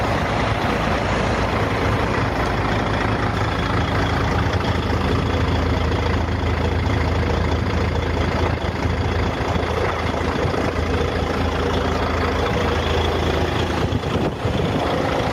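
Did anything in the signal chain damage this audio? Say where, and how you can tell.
Yes, there's gain pumping running through the whole clip. The gain ducks by roughly 5 dB under each loud sound, so everything sounds squashed. Likely cause is input gain set far too hot, with a fast limiter clamping down on every peak.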